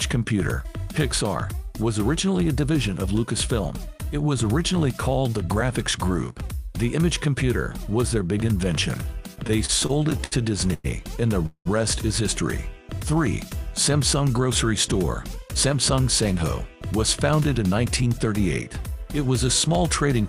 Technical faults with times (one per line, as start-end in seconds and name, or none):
9.35-10.34 repeated stalls (stutter)
10.74-10.86 call audio freeze
11.46-11.67 call audio freeze
15.22-16.00 jitter buffer speed-up
17.18-18.28 jitter buffer speed-up